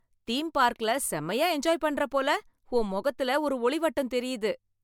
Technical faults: generation loss

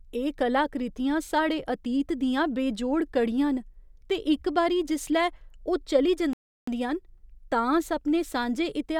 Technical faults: playback stall

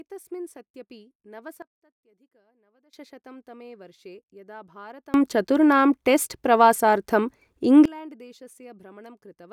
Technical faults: sudden gain jump

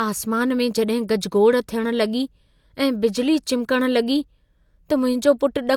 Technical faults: low-bitrate audio saved at a high bitrate

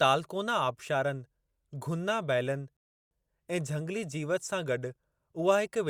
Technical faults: rebuffering stall

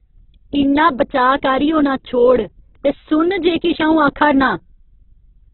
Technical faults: Opus compression

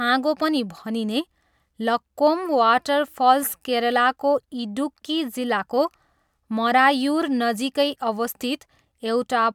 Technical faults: none

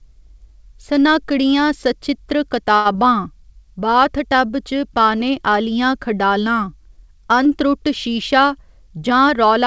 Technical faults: short stall from a late packet; short concealed packet loss; jitter buffer speed-up

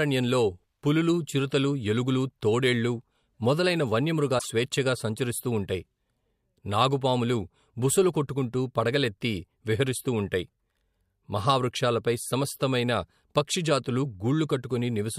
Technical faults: broken MP3 bit reservoir

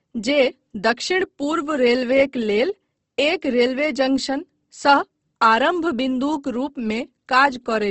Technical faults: Opus compression

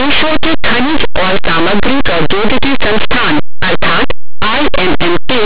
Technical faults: linear audio read as companded

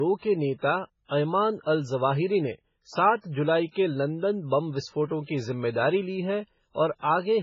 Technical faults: low-bitrate audio saved at a high bitrate

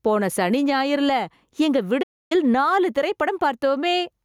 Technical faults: gain pumping; playback stall

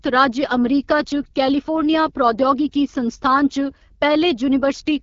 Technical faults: AMR wideband (HD Voice) codec

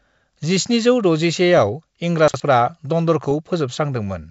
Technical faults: chunks out of order

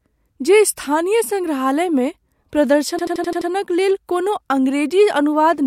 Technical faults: system hang loop

